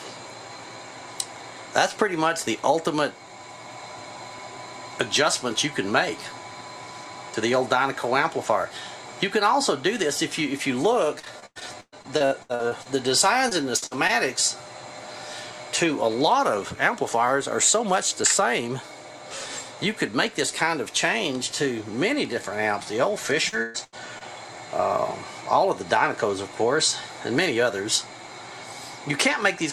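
Repeated packet loss (robotic sound) occurs at 11.19 to 12.87 s, 13.49 to 14.11 s and 23.49 to 24.23 s. Packets kept going missing. Each hole, up to about 120 ms, was patched by extending the last sound. The audio turns choppy and robotic.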